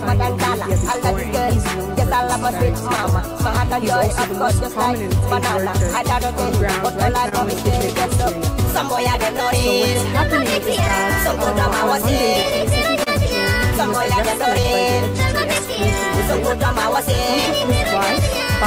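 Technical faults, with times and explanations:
Throughout: clock drift between sender and receiver. The sending clock runs roughly 2% slow, so the receiver's buffer keeps draining. This is a steady, one-directional pull across the whole clip rather than isolated packet trouble, and it drives the corrections below.
0.17–17.99 s: repeated timing corrections. To keep the buffer from running dry, the receiver repeatedly stretches the audio by repeating short pieces, playing at about 99% speed and adding around a tenth of a second overall. These are slight, unevenly spaced hiccups and a faintly unsteady pace, all lengthening, never cutting.
0.92–3.01 s, 5.21–7.35 s, 9.37–13.10 s, 17.24–18.38 s: scattered short gaps. Each run holds a handful of lost or late packets, patched by carrying the previous sound forward. The fills last up to about 30 ms and sound like brief ticks or smears, scattered one here and one there across each run.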